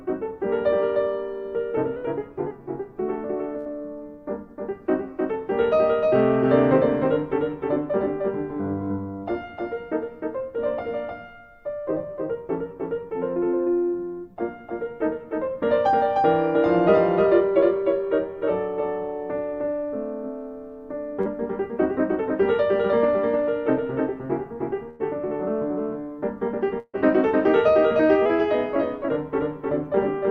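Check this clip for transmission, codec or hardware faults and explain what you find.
Several faults are present: a constant echo-like double, two brief pitch jumps, and four dropouts where packets were lost.

A doubled audio track runs throughout. A second, full-band copy trails by roughly 0.3 s at about 5 dB lower, likely from a second capture path. Unlike room echo, it is dry, with no decay.

A drift correction step occurs at 1.96–2.51 s and 28.26–29.09 s. Playback runs 6% fast, about a semitone (102 cents) sharp, then snaps back. This is likely a clock-matching adjustment. Unlike a dropout, nothing is missing.

A burst of packet loss hits at 3.58–3.67 s, 24.90–25.01 s and 26.79–26.95 s, with 80, 100 and 140 ms lost. Each is filled by a fading continuation of the preceding sound. The last one also has 40 ms of silence. The audio then resumes further on.

Short concealed packet loss occurs at 21.21–21.28 s. 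About 40 ms is patched by continuing the previous sound, heard as a brief smear. It is shorter and blends back more smoothly than the bursts.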